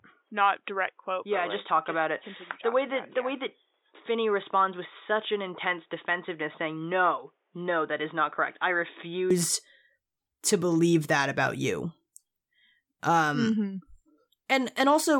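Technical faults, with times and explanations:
0.00–9.31 s, input switched to a poorer device: the system likely recorded through a lower-grade input until 9.31 s. That stretch has nothing above 3.8 kHz, so it sounds dull and boxy, about 5 dB quieter, over faint new background noise, then brightens abruptly with no gap.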